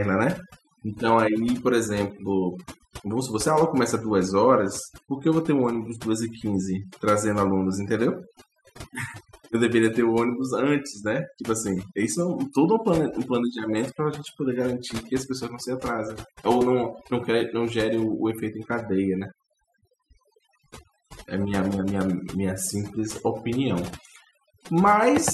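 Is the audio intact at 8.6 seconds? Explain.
No. At 8.6 seconds, as throughout the clip, the speech shows overdone noise removal. An overly aggressive noise reducer pulls individual frequency bands down whenever they sit near its noise estimate, taking quiet speech detail too, leaving near-silent gaps with twinkling specks.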